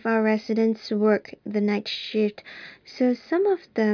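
Nothing goes wrong anywhere in this recording, so there isn't a single technical fault to point to along the way.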